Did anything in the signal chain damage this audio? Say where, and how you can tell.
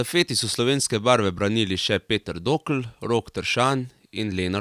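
No, nothing in the chain damaged this speech.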